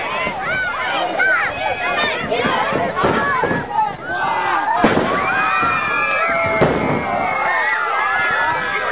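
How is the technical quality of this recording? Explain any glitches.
The audio is narrowband, with nothing above 4 kHz, which fits a G.711 telephone-style call path, and it has one glitch. At 3.95 to 4.01 s there is a short concealed packet loss: about 30 ms of audio arrived too late, and the receiver extrapolated from the preceding signal before crossfading back, which leaves a brief smear or wobble.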